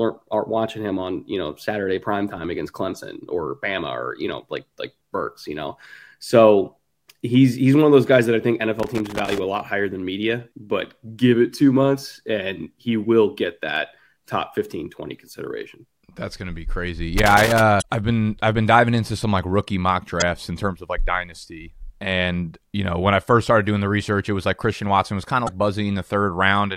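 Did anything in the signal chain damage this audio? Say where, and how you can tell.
Yes. Loose connector crackle in the analogue wiring runs from 8.80 to 9.38 s, between "guys that I think" and "a lot higher than", and again from 17.18 to 17.60 s. A worn contact making and breaking chops the signal into irregular bursts of scratchy crackle.

Damaged data in a compressed stream, at the codec or storage stage, gives short blips at 17.78–17.82 s, just before "I've been I've been", at 20.20–20.22 s, between "some like rookie mock" and "in terms of like", and at 25.43–25.49 s. The decoder misreads the corrupted frames while it hunts for sync.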